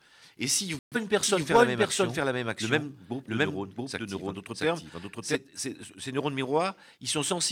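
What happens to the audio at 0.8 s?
At 0.79 s the receiver lost the digital signal, or its frames failed their checks, so it muted until good frames arrived. The result is a digital broadcast dropout: the speech cuts to silence until 0.97 s, and 128 ms of programme is gone, which fits three lost frames.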